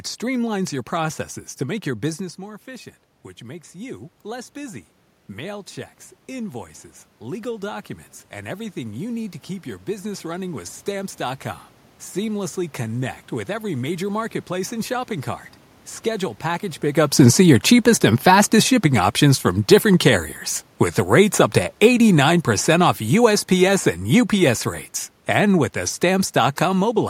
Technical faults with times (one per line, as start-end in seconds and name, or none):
1.67-5.76 automatic gain rising
6.28-11.46 automatic gain rising
21.12-24.64 automatic gain falling